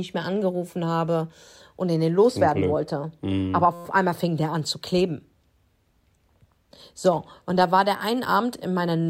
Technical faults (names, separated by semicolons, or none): system hang loop